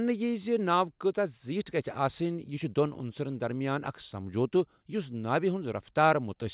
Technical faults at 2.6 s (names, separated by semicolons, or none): none